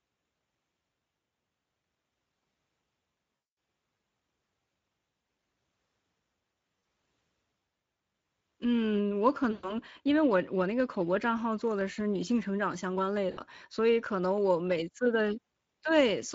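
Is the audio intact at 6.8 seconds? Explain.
No. Between 6.79 and 6.83 s, about 40 ms of the stream never arrived, which fits two lost 20 ms packets. This is VoIP packet loss concealed by the speech codec. The decoder filled the gap by repeating its last pitch period and spectral envelope at falling gain. The voice is smeared into a short buzzy tone or coloured noise that fades. Because each decoded frame depends on the one before, the speech stays weak or distorted for tens of milliseconds or more after real packets resume.

Underneath that, the whole clip, including this moment, passes through the Speex codec. The plainly audible coding damage is consistent with a mid-rate setting near 16.8 kbps. At that rate the excitation is coarsely coded, so the speech at 6.8 s sounds hoarse and grainy. Any content above 4 kHz is only a shaped noise fill rather than real detail.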